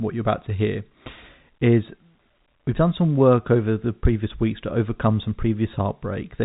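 No faults are audible in the speech; the band stops at about 3.8 kHz, as expected of G.711 telephone coding.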